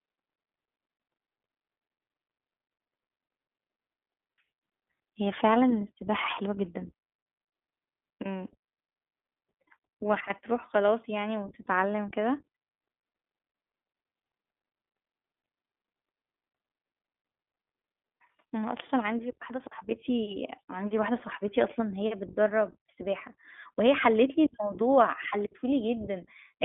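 Speech runs through the iLBC codec throughout: band-limited to roughly 250 Hz–3.5 kHz, slightly rough and synthetic, which fits 15.2 kbps narrowband coding rather than simple low-pass filtering. Around 21.18–21.22 s, lost iLBC frames leave a brief held, buzzy vowel, which fits one dropped 20 ms frame. Unlike a dropout to silence, the gap is filled, and the voice is right again almost at once.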